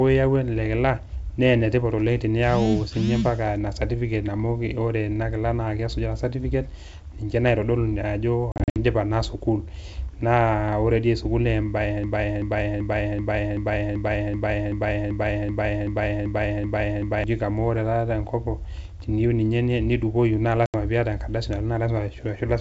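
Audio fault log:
8.52–8.77 s and 20.66–20.76 s, packet loss on an ADPCM call. Short hard-edged silent holes appear. The first is 160 ms of gaps over 240 ms, the longest 60 ms. The second loses 80 ms. After each gap the decoder's predictor and step size no longer match the sender's, so the sound comes back with brief, slight distortion.
12.04–17.24 s, broken-record loop. A 0.38 s fragment repeats exactly, back to back, 14 times. The sound that should have played during those five seconds is gone. The likely cause is a stalled player or stream that kept resending the last fragment it held.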